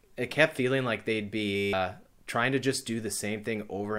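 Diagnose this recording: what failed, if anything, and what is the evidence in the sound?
A system hang loop at the driver or buffer stage: the host or driver stalled while the audio hardware kept replaying the same ring buffer. From 1.56 to 1.73 s, after "kept feeling like they'd" and before "trying to just", one 10 ms slice of the speech repeats about seventeen times. That short period turns into a steady 100 Hz buzz, and roughly 150 ms of the real speech is lost before "trying to just" resumes.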